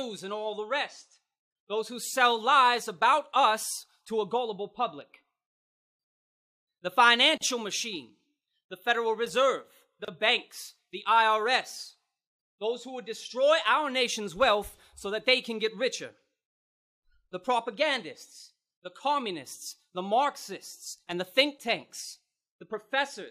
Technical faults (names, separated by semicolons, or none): gap at a join of encoded pieces